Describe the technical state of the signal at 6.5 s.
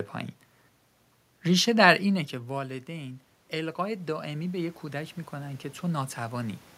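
At 6.5 s the signal is near the end of an automatic gain rising fault that runs from 1.47 to 6.65 s. The speech level at the microphone fell by about 13 dB soon after 2 s, as the talker moved away. The automatic gain control then raised its gain slowly, by about 8 dB in total. The voice swells back up over several seconds. The room noise swells with it.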